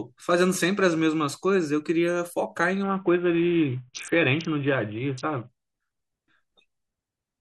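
A Bluetooth SBC bit pool drop hits this speech from 2.83 to 5.49 s: the link's encoder sharply cut its bit pool, and the dulled treble and gritty grain point to a rate near 54 kbps, too few bits for the upper sub-bands and too few to quantise the rest finely.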